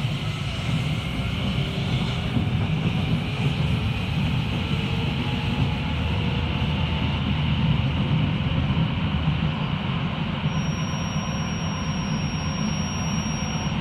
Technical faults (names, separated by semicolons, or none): feedback whistle